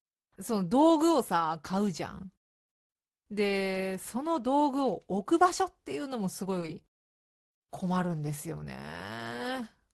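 Speech that turns choppy and robotic from 6.44 to 7.56 s: repeated packet loss, with nine short holes (longest 20 ms, about 110 ms in all) patched by stretching the preceding sound. It comes through an Opus call path whose band tops out near 12 kHz, consistent with a low call bitrate around 20 kbps.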